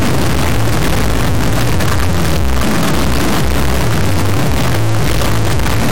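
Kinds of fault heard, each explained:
integer read as float: The 32-bit integer samples are taken as 32-bit float values. They land nearly zero, invalid or far beyond full scale, so the output slams between zero and the clipping limit. It sounds like a harsh, very loud square-wave buzz. The quietest moments fall to silence.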